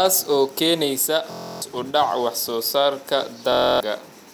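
Bluetooth stutter occurs twice in this speech clip, from 1.32 to 1.62 s and again from 3.52 to 3.81 s, just after "wax soo saarka". Each time, packets arrived late or not at all, so the receiver kept replaying its last short buffer, producing a rapid machine-gun buzz. About 0.30 s and 0.28 s of audio are lost, which suggests roughly a dozen dropped packets each time. Speech then resumes further on, as though it had continued underneath.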